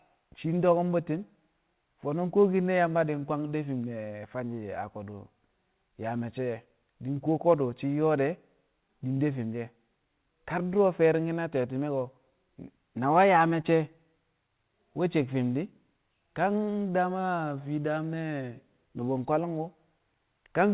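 At 13.62 to 13.66 s, a short concealed packet loss: about 20 ms of the call arrived too late, and the receiver patched the hole by extending the preceding sound, then crossfading back. It is heard as a brief smear or wobble. On a waveform the patch continues the preceding sound, and on a spectrogram it shows as a short, smoothed band. As with the rest of the call, nothing appears above 4 kHz, which fits a G.711 narrowband link.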